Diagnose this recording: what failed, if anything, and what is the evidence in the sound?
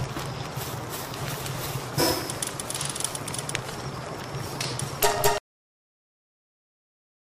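The final buffers of the recording were never written to storage, leaving a cut-off end. At 5.38 s the audio stops abruptly in the middle of a sound, with no fade or natural decay, and drops straight to digital silence that lasts until the file ends at about 7.4 s. That digital silence, rather than low-level room noise, shows the capture chain simply stopped delivering samples before the material was finished.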